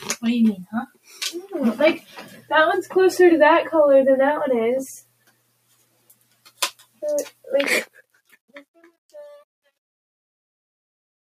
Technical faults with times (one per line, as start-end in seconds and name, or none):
0.00-11.28 noise suppressor applied to music or sounds
0.65-1.22 sound cut by the noise suppressor
1.99-2.51 sound cut by the noise suppressor
4.99-7.02 sound cut by the noise suppressor
7.30-7.47 sound cut by the noise suppressor
7.60-11.28 truncation distortion on a fade
7.86-8.55 sound cut by the noise suppressor